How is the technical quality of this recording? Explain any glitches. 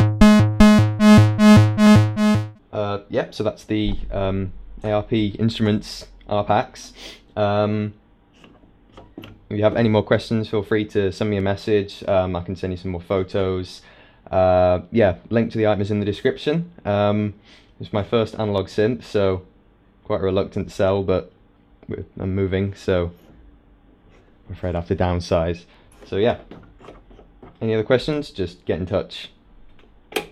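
The recording has one recurring glitch: a regular tick from clock drift buffer slips. From 1.87 s to 28.13 s, about ten clicks arrive every 2.39 s. The likely cause is two clocks disagreeing by roughly 70 ppm, so a few samples get dropped or repeated at each slip. On a spectrogram these show as thin vertical broadband lines, and in the waveform as small step discontinuities.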